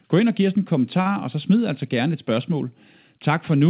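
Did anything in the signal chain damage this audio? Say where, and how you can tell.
Yes. At the network and jitter buffer stage, a packet arrived late and the buffer ran dry, causing a short stall from a late packet between 1.01 and 1.08 s, right after "og giv os en" and before "og så smid altså". The receiver stretched the last sound for about 43 ms, so that sound is held slightly too long before the speech resumes with nothing lost.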